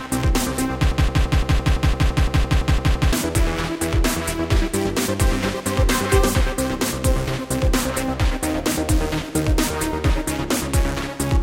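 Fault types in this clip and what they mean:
Broken-record loop: From 0.91 s to 3.13 s, a 170 ms fragment plays over and over, back to back, 13 times. Each pass is identical. The sound stutters in a rigid, mechanical rhythm of nearly six repeats a second. Whatever should have played during those two seconds is missing. The likely cause is a player, encoder or stream that stalled and kept resending the last piece it held.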